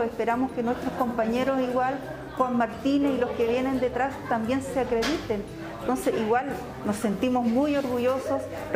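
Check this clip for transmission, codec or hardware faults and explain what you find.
No transmission, codec or hardware faults.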